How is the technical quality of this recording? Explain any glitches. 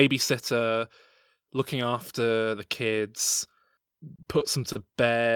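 The recording has one glitch near the end. From 4.15 to 4.96 s there is repeated packet loss, giving a robotic sound. Data kept arriving late or not at all. Each hole was patched by stretching the preceding sound, with about 140 ms filled and 40 ms lost outright. The speech turns choppy, with pieces missing.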